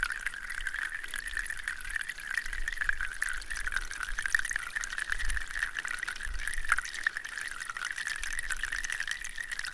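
From start to finish the clip plays at a wrong sample rate. The material runs 1.5 times too fast and sits about 7 semitones high, with speed and pitch shifted together. That fits audio captured at 16 kHz being played back at 24 kHz without resampling.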